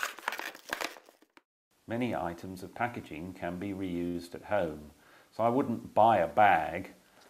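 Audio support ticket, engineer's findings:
Short stall from a late packet at 4.07 to 4.17 s: sound holds and smears for about 70 ms, slight buzz or dip. Jitter buffer ran dry; receiver stretched the last audio, then resumed in place. Nothing lost, but playout now sits 69 ms later.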